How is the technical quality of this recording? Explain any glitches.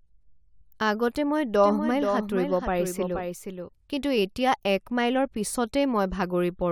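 A doubled audio track runs from 1.63 to 3.69 s. A full-band copy trails about half a second behind, about 5 dB quieter, likely from a second, slower capture path. Unlike an echo, it has no decay or room colour and starts and stops abruptly.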